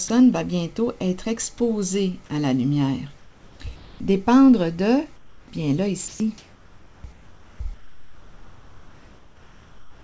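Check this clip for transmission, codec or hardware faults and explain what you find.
The clip has two recurring faults, both sounding like a call system's silence handling, heard over band-limited audio with nothing above 8 kHz, consistent with a G.722 call path.

Sound dropped by the voice detector, at 0.08 s, 3.76–4.00 s, 6.08–6.20 s and from 7.74 s to the end: the sound is cut and replaced by flat, steady hiss. The sender's voice detector likely judged real sound to be background and stopped transmitting, leaving the receiver to fill the gap.

Comfort noise in place of the background, at 3.18–3.60 s, 5.16–5.48 s and 7.12–7.60 s: the background loses its texture and becomes a smooth, uniform noise, about 4 dB quieter in the second instance. This is likely discontinuous transmission, with synthetic noise filling the pauses.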